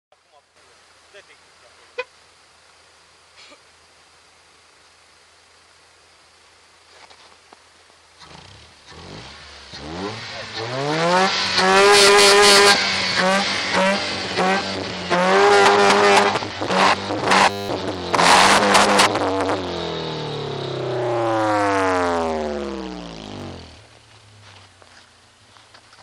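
At 17.5 s to 17.69 s, a system hang loop replays one 10 ms buffer nineteen times, giving a steady 100 Hz buzz while roughly 0.2 s of audio is lost.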